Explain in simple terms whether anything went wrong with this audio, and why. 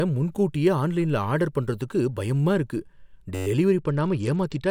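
Two things go wrong near the end.

At 3.35 s, right after "ஆர்டர் பண்றதுக்கு பயமா இருக்கு", the sound turns into a brief buzzing drone until 3.47 s. This is a system hang loop. The computer briefly froze, but the sound hardware kept replaying the last tiny slice of audio it held, about 11 ms long, eleven times in a row. Repeating that quickly, the slice blurs into a steady buzz at about 94 repeats per second rather than a stutter.

From 3.79 s, just after "பண்றதுக்கு பயமா இருக்கு டெலிவரி", to the end of the clip, the speech turns dull and muffled with a gritty, sandy edge. This is a Bluetooth SBC bit pool drop. The wireless link got crowded, so the phone sharply cut how much detail it sent in order to keep the sound from cutting out. The crisp high tones got little or nothing, and the rest was stored roughly, which adds grit.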